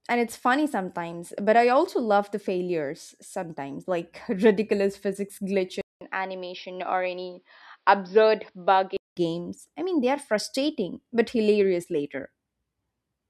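Speech that, after "ridiculous physics" at 5.81 s, drops out for 200 ms and turns dull, with nothing above 5.7 kHz, until 9.17 s before "games I mean they". The likely cause is an input switched to a poorer device.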